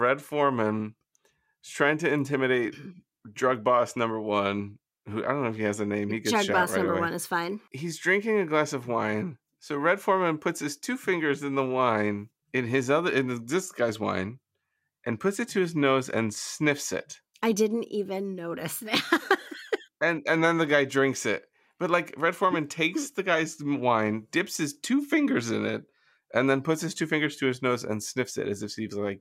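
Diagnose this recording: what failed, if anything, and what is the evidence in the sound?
Nothing failed; no stage leaves audible evidence of trouble.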